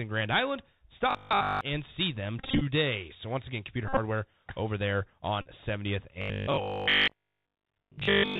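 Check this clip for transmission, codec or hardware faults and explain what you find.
The speech carries three faults: narrowband Bluetooth headset coding throughout, two stretches of robotic buzz, and three bursts of repeated headset packets.

Bluetooth CVSD headset codec, throughout: CVSD codes the signal as one bit per sample at 64 kHz, each bit nudging the level up or down with an adaptive step. Nothing above 4 kHz survives, so the speech sounds muffled, with scratchy s sounds and a granular hiss underneath.

Robotic sound from repeated short buffers, 1.11 to 1.61 s and from 6.22 s to the end: the audio turns into a rigid metallic 50 Hz buzz. Fresh audio is likely arriving too seldom, so a 20 ms block is replayed in place of new sound. The first stretch is entirely repeats; the last is mostly repeats.

Bluetooth headset packet repeated, at 2.39 to 2.62 s after "and see them", 3.88 to 3.98 s before "over there", and 5.42 to 5.49 s after "over there": lost packets are refilled by decoding the previous packet again every 3.75 ms. 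Runs of these repeats, up to roughly 30 ms and 50 ms long in the first two bursts, give a brief steady buzz near 267 Hz. About 120 ms, 75 ms and 41 ms of audio are replaced.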